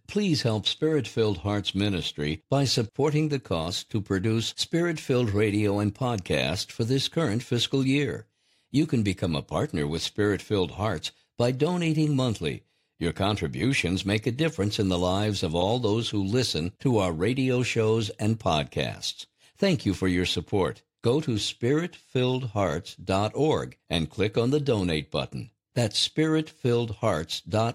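A speech recording with nothing technically wrong in it.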